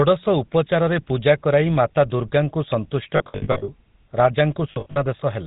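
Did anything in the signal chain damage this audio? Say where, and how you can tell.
Yes. At the codec stage, the speech was coded with the GSM full-rate codec, which models the vocal tract and drives it with sparse, regularly spaced pulses. Nothing above 4 kHz comes through, and the whole clip has a plainly audible buzzy, gravelly roughness, consistent with a 13 kbps full-rate coder.

At the network stage there are lost GSM frames from 3.16 to 3.69 s and from 4.72 to 4.99 s. The decoder covered each gap by repeating the last good frame, so the sound freezes into a rough, metallic ring. About 340 ms is lost across 520 ms in the first stretch and 140 ms across 240 ms in the second, in runs of up to roughly 70 ms.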